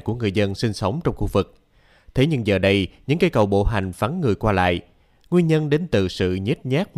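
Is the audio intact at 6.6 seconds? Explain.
Yes, the speech at 6.6 seconds is intact, with no dropout, click, distortion or other fault at that moment.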